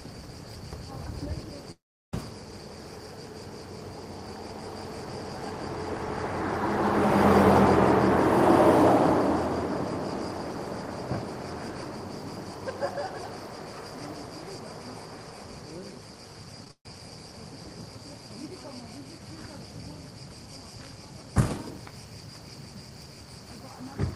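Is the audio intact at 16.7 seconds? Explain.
No. Two short concealed packet losses fall at 16.65–16.67 s and 16.68–16.70 s. About 10 ms of sound goes missing each time, and the receiver bridges it by extending the preceding sound, heard as a quick smear or wobble. On a spectrogram these show as brief blurred or repeated slivers.

Right after, a burst of packet loss runs from 16.71 to 16.86 s. The receiver fills about 136 ms by continuing the last sound and fading it, ending in roughly 90 ms of silence, and 140 ms of audio is skipped. The waveform shows a decaying stretch, then a flat gap.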